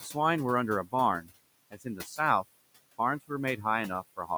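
Noise suppressor artifacts run throughout. The room noise, about 18 dB under the speech, is pulled down about 19 dB between phrases, leaving a residue in otherwise darkened spectrogram gaps. From 1.71 to 2.19 s, speech is cut by the noise suppressor. Around 150 ms of quiet speech is mistaken for noise and dropped by up to about 13 dB, sounding swallowed, with visibly shrunken waveform segments.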